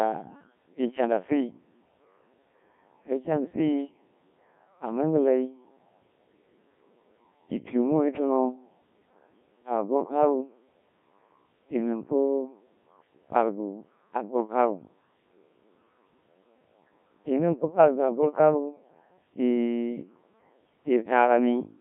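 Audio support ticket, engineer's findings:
Robotic, buzzy speech across the whole clip, heavily mangled, band roughly 150 Hz to 3.6 kHz. Looks like the Codec 2 vocoder at a very low rate, fits about 1.3 kbit/s. Decoder rebuilds the voice from sine waves, so the original waveform is gone.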